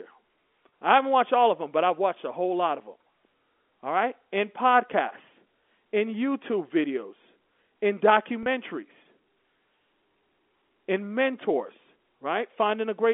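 At 0.71 s and again from 8.43 to 8.46 s there is packet loss with pitch repetition. Each gap is about 30 ms, which fits a single lost packet, and the receiver fills it by repeating the last pitch period. Because both losses are short, neither fades to silence. Each sounds like a brief, slightly held buzzy note before normal speech resumes. The G.711 telephone band, roughly 250 Hz to 3.5 kHz, carries through unchanged.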